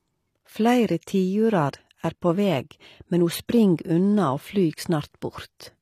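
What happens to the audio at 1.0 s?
A short hiss creeps in from 1.01 to 1.03 s, just before "tiurar er på veg", blurring the attack. This is pre-echo: the codec spread its quantisation noise across the whole block, so it fills the 23 ms of quiet ahead of the onset. Around it, the treble sounds gritty and metallic, with nothing above 15 kHz, likely from HE-AAC compression at a low bitrate near 24 kbps rebuilding the highs by band replication.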